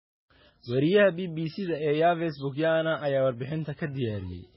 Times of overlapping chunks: none

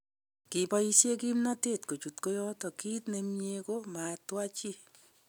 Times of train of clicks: none

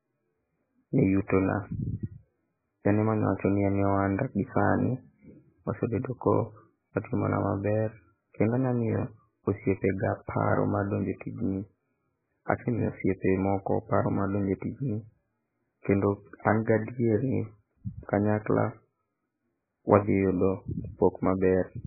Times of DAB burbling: none

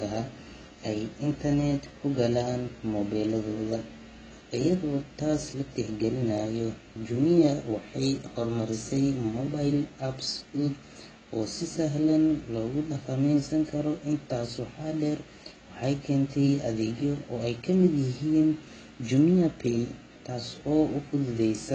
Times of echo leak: none

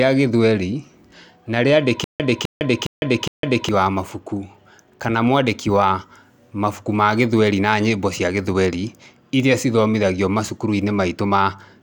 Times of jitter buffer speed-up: none

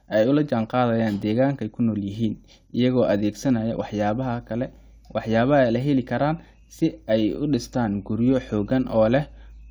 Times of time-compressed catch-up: none

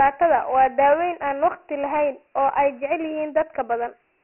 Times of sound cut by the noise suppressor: none

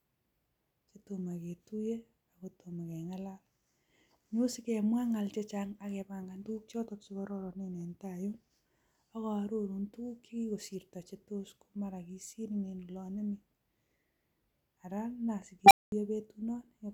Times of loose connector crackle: none

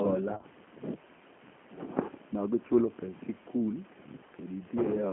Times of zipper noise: none

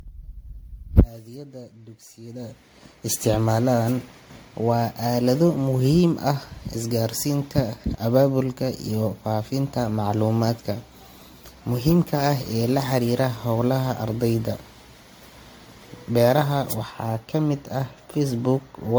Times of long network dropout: none

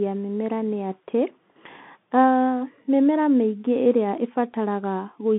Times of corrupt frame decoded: none

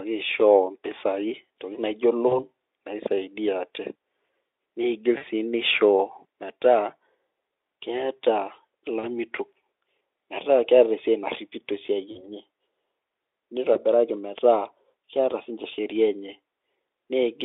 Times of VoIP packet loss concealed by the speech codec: 2.27-2.40, 5.17-5.24, 8.99-9.07, 12.11-12.27, 13.73-13.79

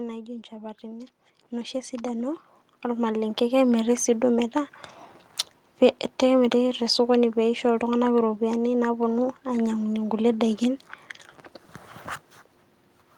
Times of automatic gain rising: 0.49-4.03

